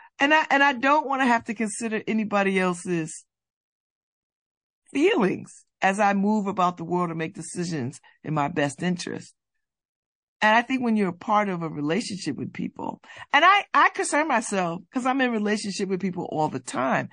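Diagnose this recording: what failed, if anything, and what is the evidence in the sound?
The codec stage shows MP3 compression throughout the speech. The damage is plainly audible: a watery, swirling texture where weak spectral lines drop in and out between frames, and smeared consonant edges. This fits a low bitrate around 40 kbps as the likely cause.

Pre-echo, also at the codec stage, appears from 13.30 to 13.33 s, after "a relationship with people" and before "and I I concern", and again from 16.64 to 16.67 s. A hiss about 23 to 25 dB above the background spreads roughly 33 ms ahead of each attack. This fits a long transform window that never switched to short blocks.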